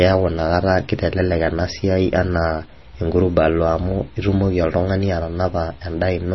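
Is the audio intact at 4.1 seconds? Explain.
No. At 4.1 seconds the speech carries MP3 compression damage, present throughout. Nothing remains above about 5.9 kHz. The damage is heavy, which fits a bitrate near 24 kbps. Starved of bits, the likely MP3 encoder cut the treble and dropped weak frequency lines. These flicker between frames, giving a watery, swirly sound with smeared attacks.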